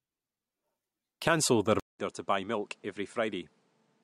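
Speech that drops out for a 200 ms silence at 1.80 s, then comes back duller, a little quieter, with a faint new noise floor and nothing above 10.5 kHz. This is likely the input switched to a poorer device, a narrower-band microphone carrying its own tone and noise.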